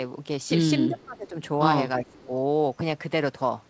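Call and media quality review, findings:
Speech suppressed in double talk, 0.88–1.36 s: speech level dips sharply, roughly 25 dB at its deepest, for about half a second. Likely the echo canceller treating simultaneous far-end activity as echo and attenuating the near-end talker.

Speech suppressed in double talk, 2.00–2.31 s: shorter dip, about 20 dB, close to a third of a second. Likely same mechanism, with suppression attenuating the near-end talker while the two sides overlap.

Echo leak, 2.07–2.26 s: faint delayed copy of the far-end voice played on the loudspeaker, 345 ms behind, around 30 dB under the speech, inside the second dip. Likely residual loudspeaker echo passing an incompletely converged canceller. Band stops at 8 kHz, consistent with G.722 at 64 kbps.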